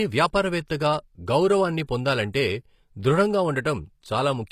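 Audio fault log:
throughout HE-AAC compression: the encoder likely kept only the lower spectrum and rebuilt the treble from copied lower bands, which fits a low bitrate near 24 kbps. The rebuilt treble plainly clashes with the harmonics below, s sounds turn gritty and lispy, and nothing rises above 14.9 kHz.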